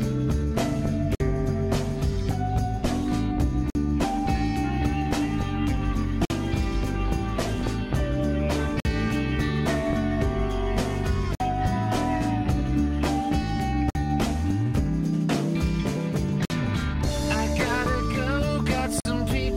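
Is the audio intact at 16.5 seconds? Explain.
No. From 16.45 to 16.50 s the sound drops out for 50 ms, a gap between chunks: silence inserted where two 2.5-second blocks join.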